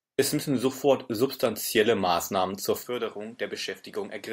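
A short speech recording loses quality abruptly at 2.83 s and stays degraded to the end. There is no gap at the change. From that point nothing is present above 13 kHz, so the sound turns duller. The level drops by roughly 10 dB. A new background noise appears, around 30 dB below the speech. The likely cause is the input switching to a poorer device, with a narrower band, lower gain and its own noise floor.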